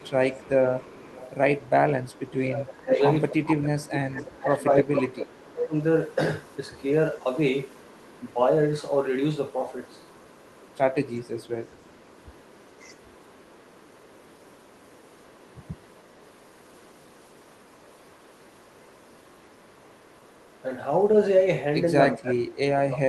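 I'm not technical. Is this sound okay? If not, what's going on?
No. From 0 to 8.3 s and again from 9.5 to 20.6 s, a faint copy of the voice repeats about 0.39 s later. This is an echo leak, likely from a speakerphone whose echo removal let some through. It sounds like a distinct repeat, not room reverberation. From 2.5 to 5.7 s and from 22.2 s to the end, the voice dips sharply or drops in pieces. This is speech suppressed in double talk, where the echo removal likely turned the talker down along with the other side's echo. The sound is pushed down rather than broken up by network gaps.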